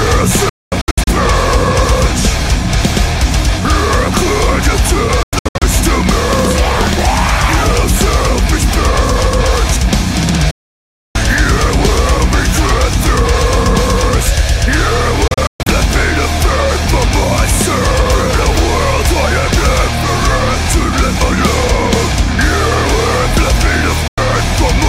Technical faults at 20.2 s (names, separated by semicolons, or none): none